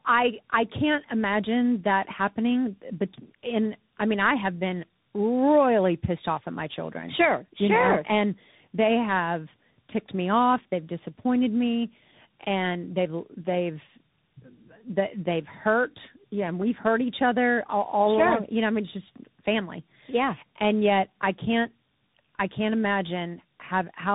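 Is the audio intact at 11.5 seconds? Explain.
No. Tandem speech coding runs throughout, including 11.5 s: the speech sounds twice squeezed through speech codecs, the second re-coding the first's degraded output, leaving it rough, warbly and muffled, with nothing above 3.8 kHz.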